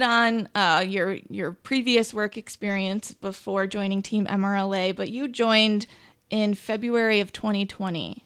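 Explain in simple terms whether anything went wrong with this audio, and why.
Yes, something went wrong. Just after "on uh your your", from about 1.66 to 3.97 seconds, the speech turns rougher and duller. This is a call bitrate drop. The connection judged it had less room, so the encoder was told to describe the sound with far fewer bits for a little over two seconds. With less detail to work with, it coded the speech more coarsely, giving that degraded quality until the rate came back up.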